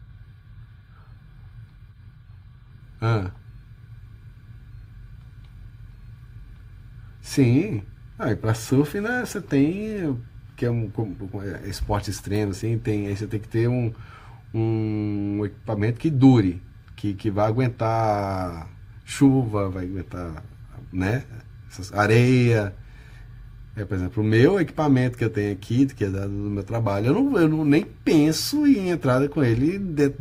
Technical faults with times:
none

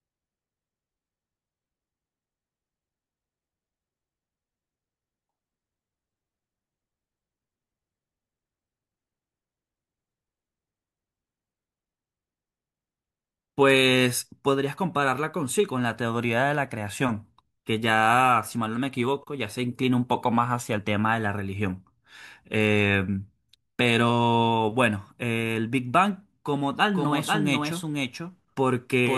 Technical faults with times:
26.94-29.18 doubled audio track

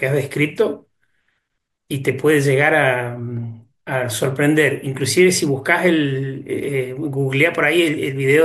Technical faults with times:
none

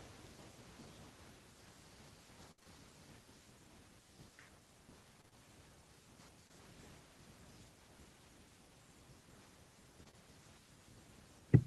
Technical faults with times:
2.51-2.67 repeated packet loss (robotic sound)
5.21-5.33 repeated packet loss (robotic sound)
6.47-6.51 short concealed packet loss
9.99-10.09 lost packet rebuilt from error correction
10.03-10.15 short concealed packet loss

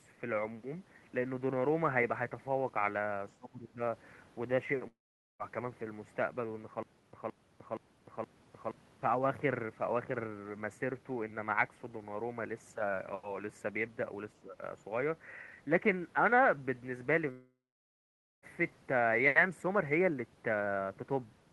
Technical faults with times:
3.39-3.80 speech suppressed in double talk
4.87-5.42 long network dropout
6.83-8.71 stutter with silent gaps
14.42-14.62 speech suppressed in double talk
17.31-18.45 long network dropout

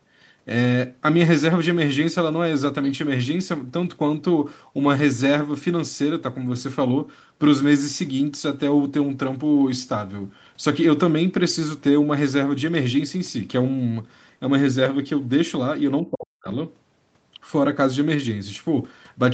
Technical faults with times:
16.02-16.48 speech suppressed in double talk

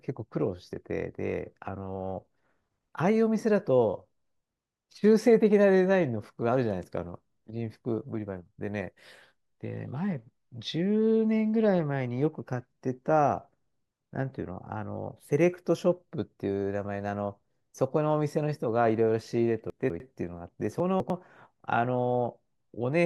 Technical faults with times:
19.70-20.00 chunks out of order
20.80-21.10 chunks out of order

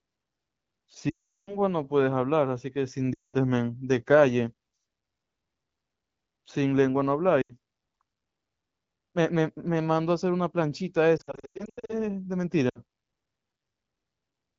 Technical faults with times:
1.09-1.58 lost AMR speech frames
3.14-3.35 lost AMR speech frames
7.42-7.56 lost AMR speech frames
11.17-12.04 lost AMR speech frames
12.69-12.78 lost AMR speech frames

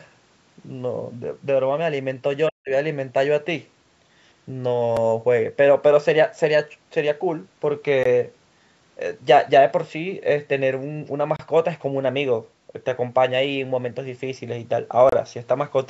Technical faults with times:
2.49-2.70 speech suppressed in double talk
4.97 block of digital silence
8.03 block of digital silence
11.36-11.39 block of digital silence
15.09-15.12 block of digital silence

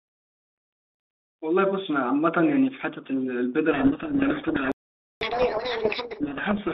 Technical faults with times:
3.72-6.74 codec payload misread
4.72-5.21 playback stall
5.21-6.20 catch-up at higher speed

